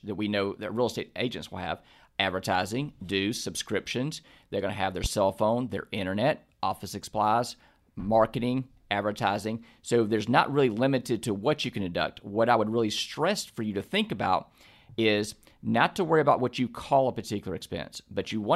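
At 5.04 to 5.08 s a single loud pop sits on top of the speech, peaking roughly 10 dB above the surrounding level, with the talking carrying on underneath. It is likely a brief voltage pulse, from a plug, switch, static discharge or driver glitch, entering the signal chain and being shaped by the circuits after it. On a waveform it shows as one tall, narrow spike; on a spectrogram, as a thin vertical stripe spanning the whole frequency range.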